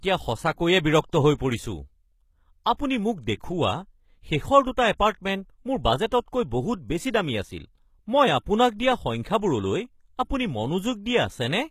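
Speech with gritty, metallic treble throughout, where sibilants sound lispy and nothing reaches above 14.9 kHz. The likely cause is HE-AAC compression at a low bitrate, around 20 kbps, where the top band is rebuilt by copying lower bands upward, so its harmonics never line up with the real ones. At 2.77 to 2.79 s, a short hiss of about 21 ms runs just ahead of an attack, softening it. That is pre-echo: the codec's block-wide quantisation noise leaks into the quiet moment before the sharp onset.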